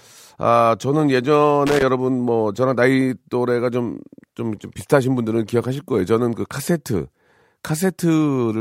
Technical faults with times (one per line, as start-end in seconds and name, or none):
1.67-1.83 loose connector crackle